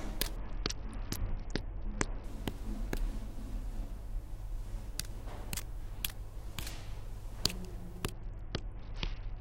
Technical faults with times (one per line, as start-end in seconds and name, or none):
0.36-2.24 Bluetooth SBC bit pool drop
8.12-9.41 Bluetooth SBC bit pool drop